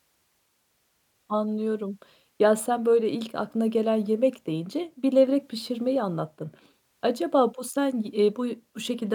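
Nothing stood out on listening to this speech recording.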